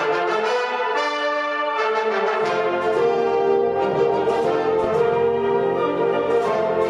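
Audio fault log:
4.80–4.93 s, DAB burbling: a short burst of watery, bubbling noise lasting about 0.14 s, a span that fits roughly six MP2 frames. Bit errors at a rate of around 0.05 percent slipped past error correction, corrupting sub-band samples and producing brief noise blips within individual bands.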